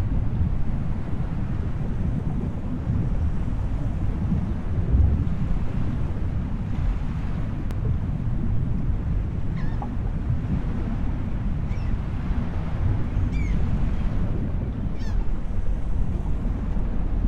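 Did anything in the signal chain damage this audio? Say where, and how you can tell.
Yes. At 2.19 s and 7.71 s the sound jumps ahead with no silence, skipping roughly 40 ms, then about 10 ms. Likely a dropped buffer (overrun) at the driver: unread samples were overwritten and the edges spliced. Waveforms show a step; spectrograms, a thin broadband line.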